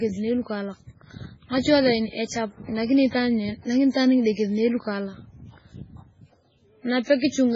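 Throughout the speech, the sound is watery and swirly, and nothing is heard above 7.7 kHz. This heavy damage is likely MP3 compression at a very low bitrate, near 16 kbps. Starved of bits, the encoder dropped weak frequency lines frame by frame and cut the treble.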